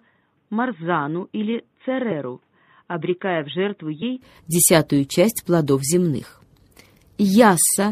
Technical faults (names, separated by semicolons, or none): MP3 compression; input switched to a poorer device; compressed frames skipped